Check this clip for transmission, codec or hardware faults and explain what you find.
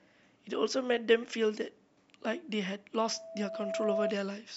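There's one real problem here, near the end. From 3.00 to 4.18 s there's loudspeaker feedback squeal. The mic is catching its own speaker, so a 657 Hz tone builds over about a second and ends up a few dB above the speech.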